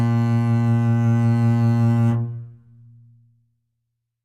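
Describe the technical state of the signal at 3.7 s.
At 3.7 s the music plays through cleanly, with no audible fault in the signal at that moment.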